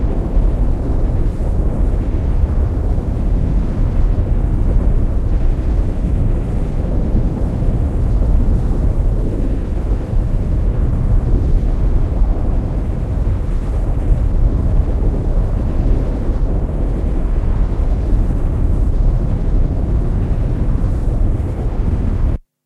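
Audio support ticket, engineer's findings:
No audible defects found in the signal path for these everyday sounds; level, continuity and timing hold steady throughout, with nothing to attribute to any component.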